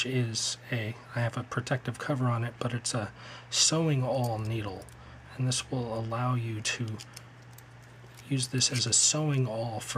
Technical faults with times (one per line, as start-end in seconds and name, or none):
none